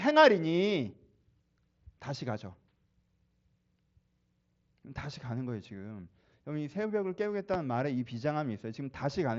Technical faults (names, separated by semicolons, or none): loud pop